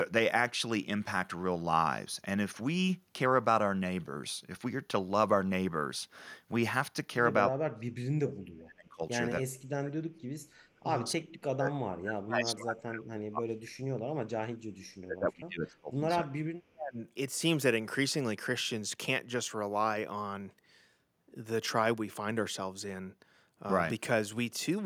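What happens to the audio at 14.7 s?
At 14.7 s the speech falls inside a stretch of speech suppressed in double talk, running from 14.17 to 16.04 s and dropping by up to about 30 dB. The likely cause is an echo canceller that cannot separate the local talker from loudspeaker echo and attenuates both.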